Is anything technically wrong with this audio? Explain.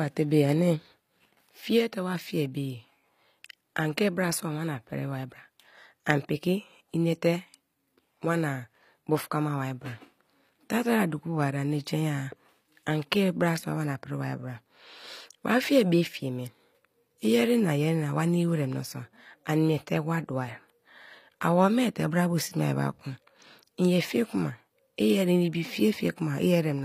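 Yes. Throughout, the speech has gritty, lispy s sounds and nothing above 15.5 kHz, likely HE-AAC compression at a low bitrate. Its rebuilt treble stays bright but mismatched, unlike a plain low-pass's dull loss.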